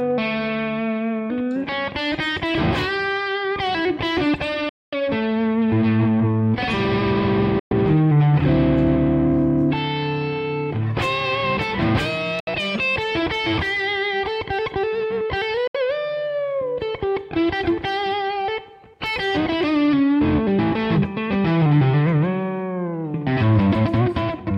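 Bluetooth dropouts at 4.69 to 4.94 s, 7.59 to 7.73 s, 12.40 to 12.48 s and 15.67 to 15.76 s. Each is a sudden hole of silence, the longest about a quarter of a second, with abrupt edges or a fade of a few milliseconds. After each gap the sound picks up further along, as though it had continued unheard, rather than resuming where it broke off. This is likely audio packets over the wireless link arriving too late and being discarded.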